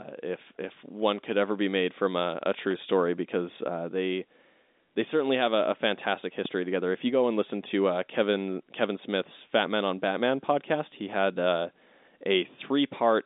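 Speech, carried in the narrow telephone band, with two loud pops, at 2.71 s after "made from a a" and 6.45 s after "have a a fantastic". Each shows as a vertical spectrogram stripe and waveform spike, likely from an electrical glitch.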